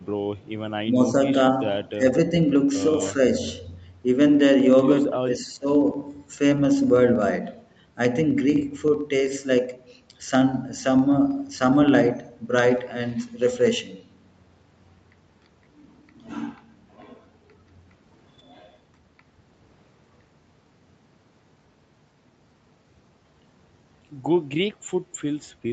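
From 0.07 s to the very end, a steady ticking runs under the speech, one tiny click roughly every 64 ms, or about fifteen or sixteen per second, heard only while there is sound to interrupt. These are periodic USB or driver dropouts. Something blocks the audio stream on a fixed schedule, and each time a sliver of audio is skipped outright rather than padded with silence. The splice leaves a small discontinuity in the waveform, which the ear hears as a click.

Between 0.37 and 0.46 s, a very faint ghost of the speech surfaces about 252 ms behind the original, far below the main signal. This is an echo leak, likely from a loudspeaker on the far end whose echo canceller let a trace of the returning sound slip through its microphone path and back into the call.

At 1.94 to 2.30 s and again at 5.10 to 5.66 s, the speech sags in level, dipping by roughly 15 dB at its deepest. The first affected stretch is brief, around a sixth of a second, and the second is nearer half a second. 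This pattern is speech suppressed in double talk, likely caused by both sides talking at once. The echo canceller could not tell the near talker from loudspeaker echo and pulled the level down during the overlap.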